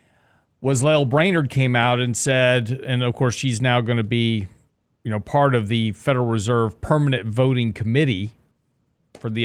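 Speech with a call bitrate drop from 0.65 to 2.69 s, ending before "and of course she's". The audio turns rough and muffled, consistent with the encoder falling from roughly 40 to 17 kbps. On a spectrogram, high frequencies vanish and the texture looks smeared.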